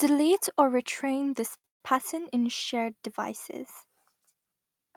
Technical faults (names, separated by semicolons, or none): short stall from a late packet; call audio freeze